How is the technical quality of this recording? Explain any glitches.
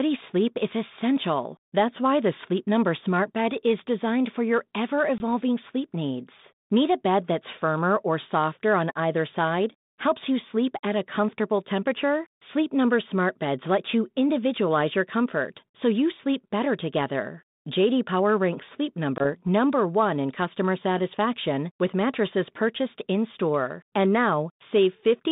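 The recording has two brief gaps from packet loss on an ADPCM call, heard over a G.726 telephone line at 32 kbit/s with the band held to about 150 Hz to 3.7 kHz and a light codec grain.

At 5.18 to 5.21 s, between "designed for your ever" and "sleep needs", and again at 19.18 to 19.26 s, the sound drops into a hard-edged silent hole. Each hole fits one lost 20 ms packet. While the packet is missing, the decoder's adaptive predictor and step size drift away from the sender's. When the sound returns, it briefly comes back slightly distorted, then recovers within tens of milliseconds. That short recovery after the hole is what separates this from an ordinary PCM dropout, which resumes cleanly.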